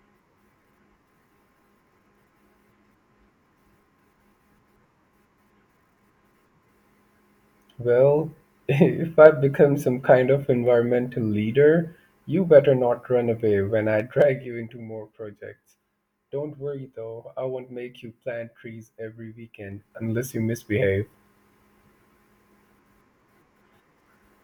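Zipper noise appears at 13.89 s, after "not run away when", and lasts until 14.84 s. The level drops by about 15 dB in 3 dB jumps, roughly five per second. Each jump clicks, so the speech picks up a faint ticking as it fades. It returns from 19.67 to 20.09 s, after "you plant trees every" and before "you misbehave". The level climbs back about 15 dB, now around ten steps per second, giving a quicker zip.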